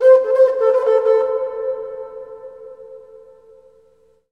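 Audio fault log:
throughout imaging from linear upsampling. Highs dull toward 12 kHz. Faint mirror images, roughly 55 dB down, add thin shimmer, which fits 24 kHz audio linearly raised to 44.1 kHz.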